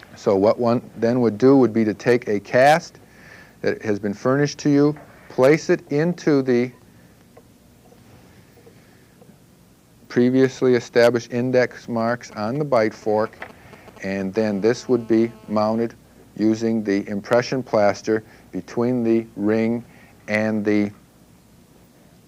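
From 11.99 to 14.37 s you get GSM signalling bursts: a nearby 2G phone is sending short groups of radio pulses, and the audio circuitry rectifies them into a galloping dit-dit-dit of brief 216.7 Hz buzzes, sitting roughly 20 dB under the signal.

Right after, from 14.39 to 15.85 s, it turns into steady GSM phone buzz as the phone goes into a call. Now it's transmitting continuously at 216.7 bursts per second, so you hear a hard, raspy, harmonic-rich buzz about 29 dB below the signal and unrelated to it.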